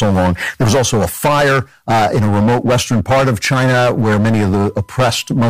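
A harsh, fuzzy grit sits on every loud syllable from start to finish. This is hard clipping: the speech is driven about 15 dB beyond what the signal path can pass, so roughly a fifth of the waveform has its peaks sliced flat, spraying high harmonics across the spectrum.

From 3.77 s to the end at 5.50 s, a thin, steady whine at 1 kHz joins the speech, faint at around 40 dB below it. This is USB whine: current drawn in the bus's 1 ms frames leaks through power or ground into the audio, leaving a fixed-pitch tone.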